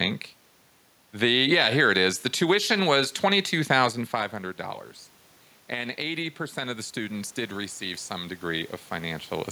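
From 5.7 s to 9.32 s the voice and the room noise behind it swell together, climbing slowly by about 6 dB over several seconds rather than in one step. This is automatic gain rising. The level reaching the microphone had dropped by about 11 dB, after the talker moved away around 4 s. The gain control judged the input too quiet and raised its gain gradually, lifting the background along with the speech.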